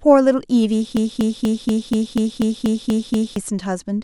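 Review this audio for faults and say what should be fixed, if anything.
A broken-record loop runs from 0.97 s to 3.36 s. A fragment of about 0.24 s of speech repeats exactly, back to back, ten times. The speech that belonged in those 2.4 seconds never plays. The likely cause is a stall in the player, encoder or stream, which kept resending the last piece it held instead of new audio. To prevent it, make the playback or streaming path output silence on underrun rather than replaying its last buffer.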